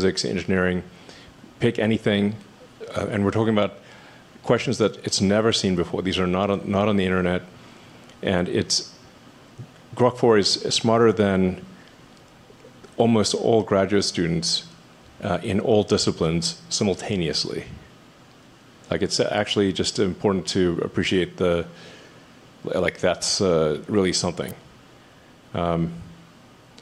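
Right near the end, from 24.49 to 24.51 s, there's an electrical switching spike: a sharp snap sitting on top of the sound, peaking around -15 dBFS. It's likely a nearby switch, motor or static discharge arcing briefly, with the audio line picking up that burst.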